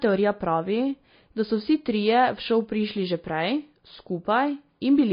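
Throughout the speech, the audio was most likely squeezed through MP3 compression at a low bitrate, consistent with something near 24 kbps. Starved of bits, the encoder cuts off everything above 5 kHz and drops weaker frequency components, letting them blink in and out between frames. The result is plainly audible: a dull, band-limited sound with a watery, swirling texture, metallic chirps on s sounds, and smeared, softened attacks.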